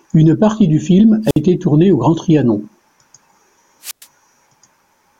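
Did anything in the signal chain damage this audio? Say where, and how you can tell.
Yes. Hiss swells, then near silence at 1.25–1.39 s, after "partie du film" and before "tournée au" (about 56 ms muted), and at 3.82–4.06 s (about 111 ms). This is wireless microphone squelch dropout: the FM radio link faded and the receiver's squelch muted its output.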